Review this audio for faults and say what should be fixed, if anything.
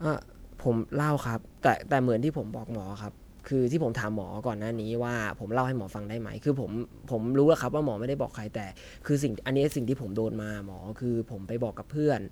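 Generation loss, throughout the speech: the audio sounds swirly and hollow, with smeared attacks and a watery haze that is heavier than one pass at this quality would leave. The likely cause is repeated lossy encoding, with the character pointing to MP3 at 128 kbit/s applied about four times. Each decode and re-encode quantises again on a shifted frame grid, so spectral holes and noise pile up rather than cancel. To prevent it, keep a lossless master through every editing stage and encode to MP3 only once, at the final export.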